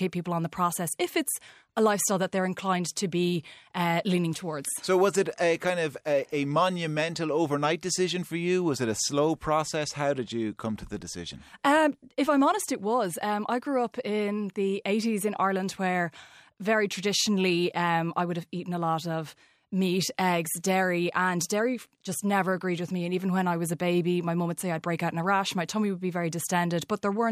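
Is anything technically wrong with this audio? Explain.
No, the speech signal stays technically intact throughout, with nothing in it that points to a recording, processing or transmission fault.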